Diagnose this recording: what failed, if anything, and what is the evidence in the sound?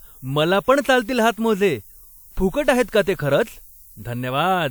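Sample-format conversion failed, leaving low bit depth with noise shaping across the whole speech clip. A steady, thin hiss sits roughly 25 dB below the speech and climbs sharply toward the top of the band. With only 9 bits, the rounding error is pushed upward. A spectrogram shows a constant floor brightening toward the highest frequencies, even between words.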